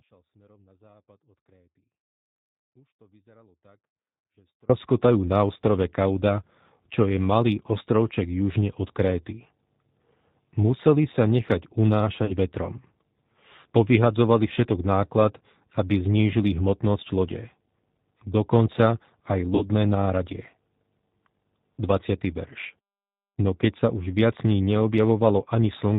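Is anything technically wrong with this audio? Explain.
Yes. The whole clip carries G.729 codec damage. The speech sounds band-limited below 4 kHz and slightly rough and synthetic, as it would from an 8 kbit/s coder that rebuilds speech from a vocal tract filter, pitch predictor and sparse pulses. Unlike ordinary lowpass filtering, the voice texture itself sounds artificial.

From the start until 4.7 s there is an audio dropout to a faint residue. The signal is already missing when the clip begins, and only a faint trace remains, roughly 35 dB below normal level, before the speech cuts back in abruptly. The likely cause is a break in the source while the path after it stayed live. The abrupt return, with nothing fading in, marks it as a dropout rather than a pause.

At 12.25 to 12.33 s and at 19.55 to 19.65 s, VoIP packet loss is concealed by the speech codec. About 40 ms and then 60 ms of audio went missing, which fits two and three lost 20 ms packets. 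The decoder extended the last pitch and filter at falling gain, so the speech smears into a brief buzzy tone or coloured noise that fades, and sounds weak for a moment afterwards. Unlike the dropout, these gaps are filled with synthetic sound rather than near-silence.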